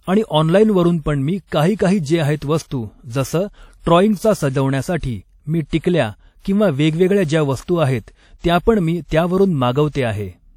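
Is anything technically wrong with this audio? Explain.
Yes. Throughout the speech, the audio was likely passed through WMA compression at a low bitrate, with damage that fits an early WMA encoder running at about 48 kbps. Its long transform blocks smear quantisation noise over tens of milliseconds around each sound, and weak spectral detail is discarded. The result is a plainly audible ringing, washy quality with a hiss that swells and fades with the speech, and nothing above 17.9 kHz.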